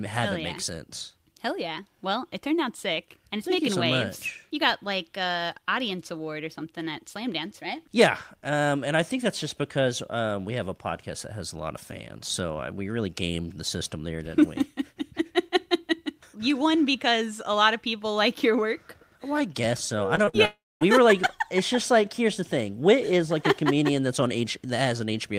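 Short concealed packet loss occurs three times in quick succession just after "I guess so I": at 20.15 s (lasting 0.03 s), at 20.25 s (0.04 s) and at 20.29 s (0.06 s). In each case about 20, 20 and then 40 ms of audio failed to reach the decoder in time. The receiver bridged each gap by extending the preceding sound and then blending back into the real signal, which produces a brief smear or wobble in the audio.

A long network dropout follows from 20.45 to 20.83 s, ending just before "were like". About 360 ms of audio is missing, likely because packets stopped arriving for that stretch. The receiver first continues the last sound as a fading buzz or hiss, and that gives way to roughly 240 ms of silence. The audio then resumes partway along, with the lost portion gone rather than delayed.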